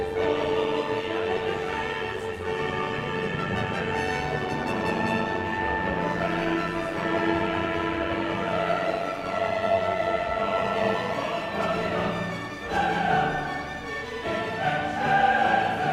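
From 0.0 to 11.15 s there is overlap-add ripple. The frames were rejoined with a gain that doesn't sum flat, so the level pulses about 6 dB around a hundred times a second. That gives a metallic buzz with extra tones around each note.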